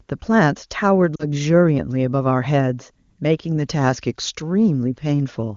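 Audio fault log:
1.16 to 1.26 s, lost AMR speech frames: radio errors spoiled about 40 ms of frames, and the decoder repeated its last good settings at falling gain, so the speech briefly smears and dips.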